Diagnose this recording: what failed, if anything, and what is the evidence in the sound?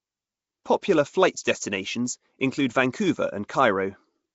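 Codec stage: throughout, the speech has a rough, hissy halo and a smeared, underwater texture, with nothing above 7.7 kHz. This is likely Nellymoser compression filling starved bands with noise.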